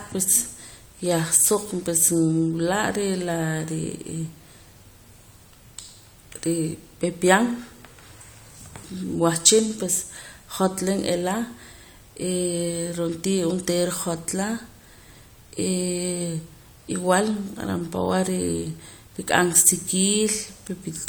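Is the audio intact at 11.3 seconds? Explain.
Yes, at 11.3 seconds the audio is intact, with no audible fault at that moment.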